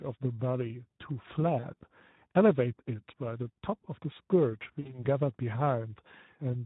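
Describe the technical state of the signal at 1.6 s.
At 1.6 s the speech is briefly smeared into a stretched, fading sound from 1.59 to 1.67 s. This is VoIP packet loss concealed by the speech codec. About 40 ms of audio, which fits two lost frames, was rebuilt by the decoder extending its last pitch and filter at falling gain, so the sound stays thin just after the gap. Underneath, the whole clip has a hoarse, noisy texture that is plainly audible. This comes from the Speex codec at a low setting, consistent with around 11 kbps, where too few bits remain to describe the excitation cleanly.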